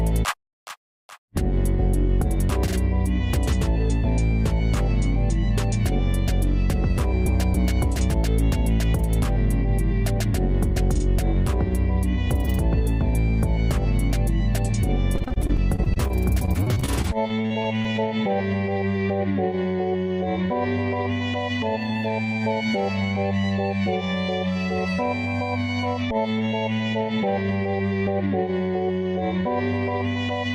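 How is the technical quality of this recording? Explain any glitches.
There's one real problem: repeated packet loss, giving a robotic sound, from 15.15 to 18.0 s. Short dropouts of up to 40 ms, each patched by stretching the previous sound, make it choppy and robotic.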